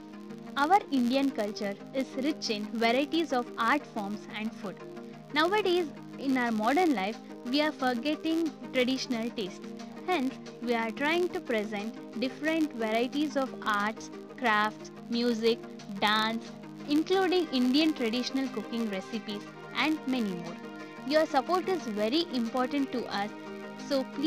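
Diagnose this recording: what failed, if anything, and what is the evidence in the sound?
The fault is a filter restarted on every block, at the driver or buffer stage. Throughout, a 93.8 Hz buzz rises and falls with the signal's level, which fits a 512-sample block. Unlike mains hum, it follows the signal's level and isn't at 50 or 60 Hz.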